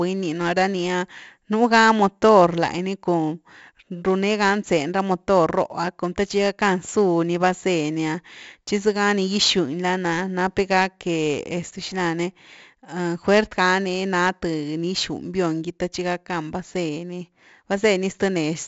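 Throughout, the speech has passed through 4-bit ADPCM compression: each sample is coded as a coarse step from a prediction, leaving heavy gritty hiss on loud passages and roughened onsets, with nothing above 7.7 kHz, which fits 64 kbps at a 16 kHz rate.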